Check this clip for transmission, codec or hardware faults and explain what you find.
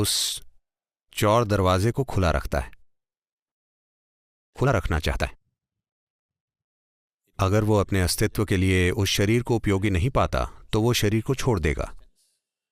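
Two faults show up, both around the middle of the clip.

From 3.47 to 4.57 s the audio cuts out for about 1.1 s, leaving near-total silence, and when it returns roughly 0.6 s of material is simply gone. That's likely a long network dropout, where packets stopped arriving and the receiver had nothing to play, so it skipped ahead once audio resumed. The delay shifted by around half a second in the process.

Right after, from 4.60 to 6.56 s, the sound runs hurried, at about 122% speed with unchanged pitch. That's a jitter buffer speed-up. The buffer held more audio than it aims for, and this backlog gets drained by snipping out short pitch-period chunks, trimming about 0.4 s in total.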